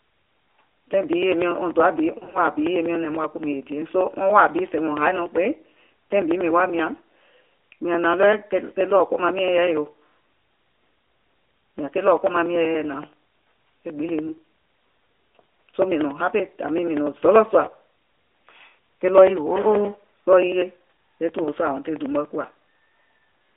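AMR narrowband mobile codec, throughout the speech: the whole clip passes through a narrowband mobile speech codec that samples at 8 kHz and rebuilds the voice from a vocal-tract model excited by a few pulses. The line keeps only about 300 Hz to 3.5 kHz, so the voice sounds thin and boxed-in. The plainly audible buzzy, synthetic edge fits the 10.2 kbps AMR-NB mode, where too few bits are left to capture the finer detail of the excitation.

Lost AMR speech frames, from 2.18 to 2.38 s: this is the longest stretch of damage. Radio errors corrupted a string of 20 ms frames, which fits six frames lost across about 160 ms. No single gap runs longer than 40 ms. For each missing frame the decoder repeats the last good pitch and vocal-tract settings at reduced gain, so the sound stutters and warbles in short dips instead of going silent. It then comes back weak or rough for a moment.

Lost AMR speech frames, at 14.28 s and at 21.44 s: each is a single concealed 20 ms frame. 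The decoder again bridges the gap by repeating the previous frame's settings more quietly. What you hear is a brief dip or warble in level and timbre, too short to fade out fully, after which the speech returns, weak or rough for a moment.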